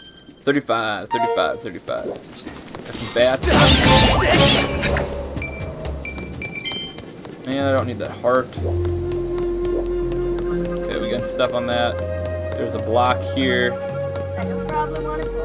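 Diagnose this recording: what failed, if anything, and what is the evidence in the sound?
Nothing failed in this recording, and the sound gives no evidence of any fault.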